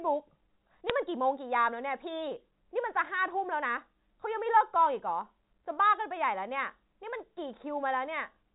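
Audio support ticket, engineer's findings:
Bit errors on the digital phone line, 0.90 s: a few flipped bits corrupt individual G.711 mu-law samples over the speech.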